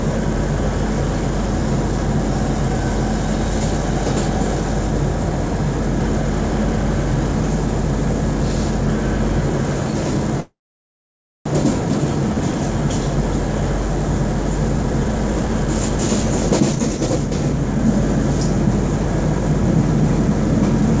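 Call audio freeze, 10.40 to 11.47 s: the sound stalls, fades briefly, then goes silent for about 0.93 s, likely from delayed packets emptying the jitter buffer. It resumes where it stopped, with nothing lost. Jitter buffer speed-up, 14.69 to 17.76 s: the receiver trims repeated pitch-period slices, about 0.4 s in total, so the audio runs at 114% speed at unchanged pitch and sounds hurried.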